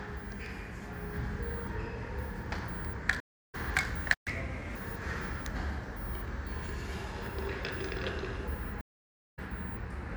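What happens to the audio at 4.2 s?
The sound cuts out abruptly at 4.14 s and stays silent until 4.28 s, a dropout of roughly 120 ms, before resuming where it broke off. This is a playback stall, most likely because the player ran out of buffered data or its output thread was briefly blocked, leaving nothing to send to the output until it recovered.

From 4.28 s to 4.76 s the audio runs audibly fast and sharp, then settles back to normal speed and pitch. This is catch-up at higher speed. After the gap, the player resamples its backlog to play at 1.25 times normal speed, which raises the pitch by around four semitones. Running faster for about half a second wins back the time lost in the silence.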